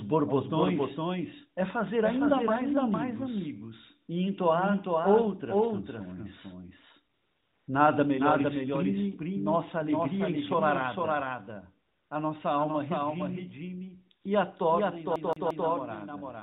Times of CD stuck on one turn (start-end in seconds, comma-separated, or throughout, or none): 15.16-15.68